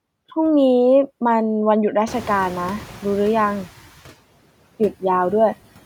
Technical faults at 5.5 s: noise suppressor artifacts

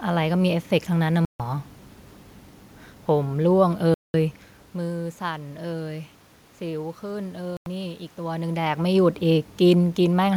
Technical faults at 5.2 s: none

